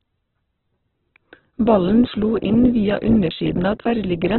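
Throughout the clip, the likely cause is heavy Opus compression. The encoder is starved of bits, which fits a rate near 8 kbps, so it fills bands with noise and folded copies. The speech turns grainy and rough, with nothing above 4.1 kHz.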